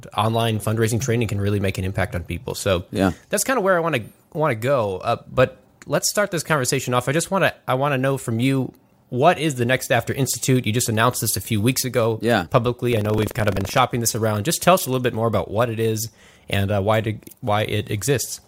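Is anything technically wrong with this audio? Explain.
Yes, buffer tearing from 12.89 to 13.80 s: writer and reader cross mid-buffer, splicing in stale audio, giving a 23.4 Hz rattle that fits a 2048-sample buffer.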